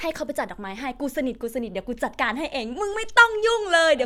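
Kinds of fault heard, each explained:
No technical fault can be heard in this speech recording. There is nothing here that calls for a line of its own.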